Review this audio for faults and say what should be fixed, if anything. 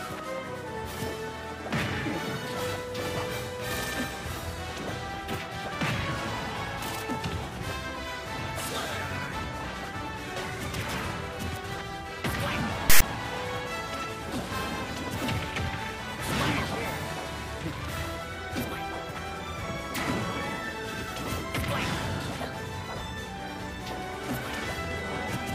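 At 12.90 to 13.02 s, a burst of about 0.12 s is file tags played as audio. A block of text metadata has been read as sample values, giving a loud, lopsided rasp offset to one side of zero, followed by hard-edged silence where the tag's zero padding was decoded. The silent tail and the rasp's one-sided offset distinguish it from a dropout or ordinary codec noise burst. Prevent it by having the decoder parse and skip tag blocks before reading audio data.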